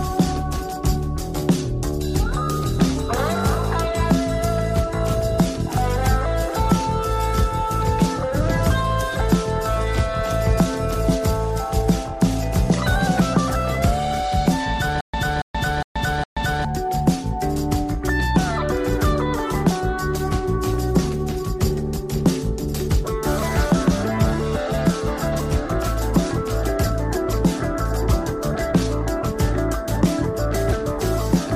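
From 15.01 s to 16.65 s the audio breaks into a stutter with silent gaps: a 281 ms fragment repeats four times, each followed by 129 ms of digital silence, a 410 ms cycle. This likely comes from a player or stream stall, and the material meant for that span is lost.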